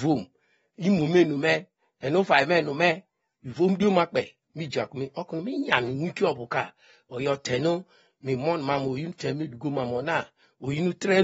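Throughout the recording, the speech has likely been squeezed through AAC compression at a low bitrate, with damage that fits AAC-LC running at around 24 kbps. Short of bits, the encoder has cut the bandwidth so that nothing survives above 7.7 kHz, and it quantises the remaining spectrum coarsely. The voice sounds dull and smeared from start to finish, and sustained sounds and sibilants carry a warbling, fizzy texture that is plainly audible.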